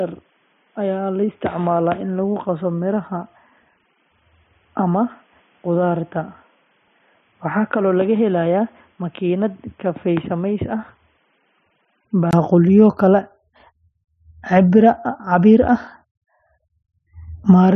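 Speech that sounds dull and boxy from the start until 12.33 s, with nothing above 3.8 kHz, a level roughly 5 dB lower and a different background noise roughly 40 dB below the voice; a 20 ms silence then marks the return to full, clear sound. This is likely an input switched to a poorer device, then back. Unlike a simple bandwidth drop, the tone, level and noise floor all change together at one abrupt switch.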